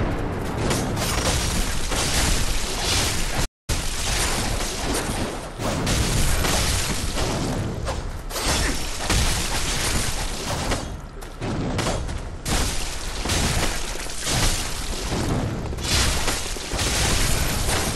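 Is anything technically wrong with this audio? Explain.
Yes, there are two related faults. From 3.45 to 3.70 s there is a playback stall. The player likely ran short of buffered data or had its output thread held up, so the sound cuts off mid-flow into about 230 ms of silence before resuming.

From 3.70 to 4.16 s there is time-compressed catch-up. To work off the backlog from the stall, the player trims small slices and cross-fades the joins, running at 1.5 times normal speed. The sound is audibly rushed at unchanged pitch.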